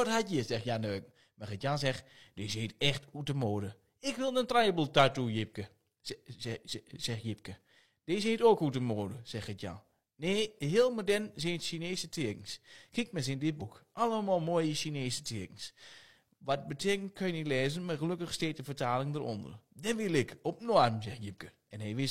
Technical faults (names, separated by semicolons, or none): damaged data in a compressed stream